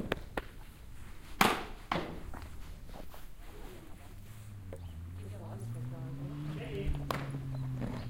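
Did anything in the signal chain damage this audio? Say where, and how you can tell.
No, no signal-chain damage heard.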